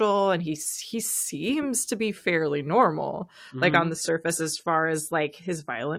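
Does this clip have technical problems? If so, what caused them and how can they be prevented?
Yes. From 3.47 s, just after "to be fairly normal", to the end, the speech drops to an adaptive stream at a lower bitrate. Nothing remains above 14 kHz and codec artefacts rise, which fits a step from 96 to 32 kbit/s AAC. Unlike a dropout or rebuffer, there is no gap, only a sudden quality change. A steadier, faster connection or a larger playback buffer prevents it.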